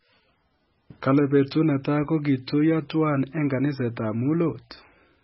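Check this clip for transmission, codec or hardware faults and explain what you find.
One codec fault is present throughout the speech. The likely cause is heavy MP3 compression at a bitrate consistent with about 16 kbps: nothing remains above 5.6 kHz, and starved frequency lines flicker between frames, giving watery, swirly sibilants and smeared attacks.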